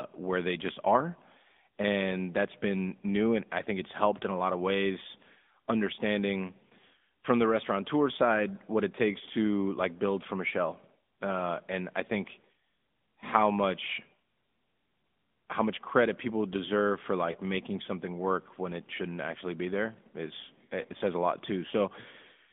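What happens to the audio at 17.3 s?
Between "credit people deserve for" and "making something", around 17.32 to 17.36 s, there's a lost AMR speech frame. The decoder patches the gap by repeating its last pitch and vocal-tract settings at lower gain, so you get a quick dip or warble that sounds like one missing 20 ms frame. Underneath that, the AMR narrowband mobile codec limits the whole clip to roughly 200 Hz to 3.6 kHz at 10.2 kbps, which gives the voice a clearly buzzy, synthetic edge.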